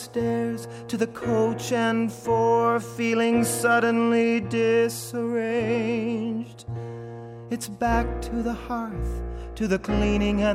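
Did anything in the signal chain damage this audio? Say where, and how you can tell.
No, nothing in the signal chain stood out as damaging this audio on listening.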